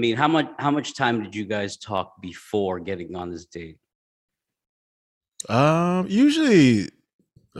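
Single sharp clicks at 1.98 s and 3.22 s are likely dropped samples. A handful vanish and the waveform jumps, but unlike a dropout, no speech goes missing.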